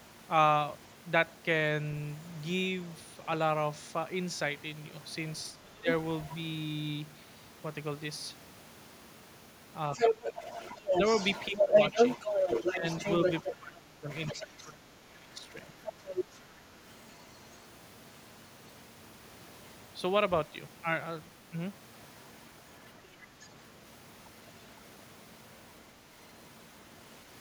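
At 5.53 to 5.88 s the speech dips by around 10 dB for about a third of a second. This is speech suppressed in double talk. The likely cause is an echo canceller that could not separate the local talker from loudspeaker echo while both sides spoke, so it turned everything down. On a waveform the envelope sags. On a spectrogram the band fades.

From 6.28 to 6.34 s a brief scrap of the other side's voice leaks through, roughly 20 dB under the speech. It shows on a spectrogram as a short, faint streak of a second harmonic pattern.

From 9.93 to 14.69 s the other side's voice leaks through at about the same level as the main speech, so two voices overlap. On a spectrogram two harmonic stacks appear at once.

Starting inside that stretch the main speech is suppressed twice. The first dip runs from 9.95 to 10.36 s at around 10 dB. The second is deeper, around 20 dB, and comes in pieces between 11.5 and 15.74 s, adding up to about two seconds. 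These show as notches or gaps in the envelope, which fits a likely suppressor clamping down during double talk.

At 15.85 to 16.39 s the leak returns at similar strength.

At 22.84 to 23.48 s a faint residue sits about 25 dB below the speech. On a spectrogram it is a low-contrast smear.

Across all four leaks the likely cause is incomplete echo cancellation, with the loudspeaker signal reaching the microphone.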